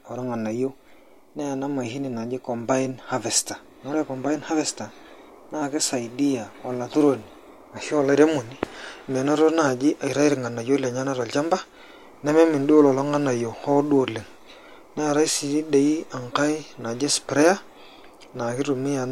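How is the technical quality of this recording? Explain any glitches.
The speech carries one audible glitch, a loose connector crackle from 7.22 to 7.25 s. A worn or dirty contact in the signal path briefly made and broke repeatedly, chopping the signal, which sounds like a short, irregular scratchy burst. A waveform would show jagged dropouts and spikes, and a spectrogram would show thin broadband vertical streaks across that span.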